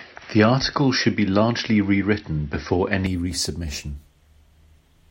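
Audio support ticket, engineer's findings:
Speech dull and boxy from 0.0 to 3.06 s, then opens up cleanly with no gap at the changeover. Likely an input switched to a poorer device, probably a headset call profile or a second mic, with nothing above 5.8 kHz, a faint extra noise floor well under the speech, and a level a few dB off. Worth checking which input the app grabs at record start.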